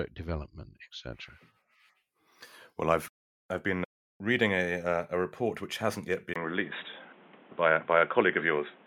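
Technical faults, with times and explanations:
6.34 to 8.87 s, input switched to a poorer device: after "report which hasn't yet", a 20 ms gap. The sound then turns dull and boxy, with nothing above 3.8 kHz and new faint background noise. This is likely a change to a narrower-band microphone.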